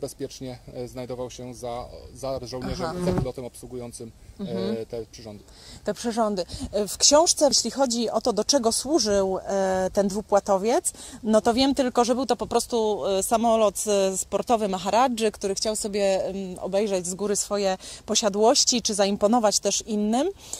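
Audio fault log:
No faults can be heard anywhere in this audio.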